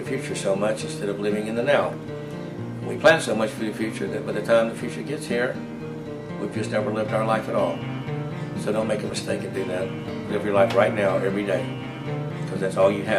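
From 6.16 to 7.18 s the highest treble dulls slightly: channel delay (comb filtering), one channel lagging about a sample, cancelling near 20 kHz in mono.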